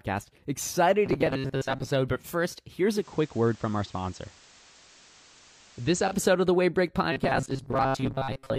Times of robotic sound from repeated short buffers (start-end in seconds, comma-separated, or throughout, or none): 1.06-1.91, 7.12-8.58